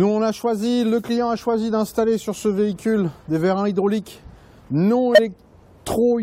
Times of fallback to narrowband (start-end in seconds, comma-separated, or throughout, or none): none